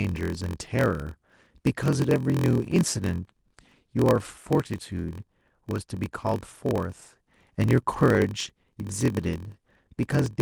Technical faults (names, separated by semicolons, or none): block size mismatch (padded)